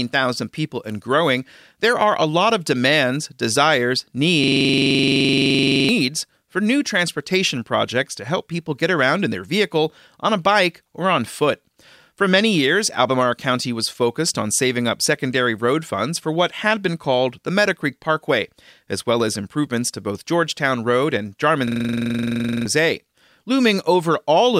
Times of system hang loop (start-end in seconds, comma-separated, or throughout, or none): 4.44-5.89, 21.67-22.66